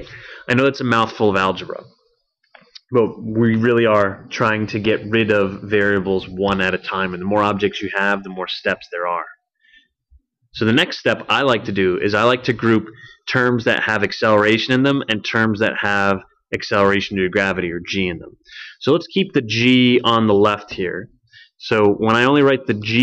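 No technical faults found anywhere in the audio.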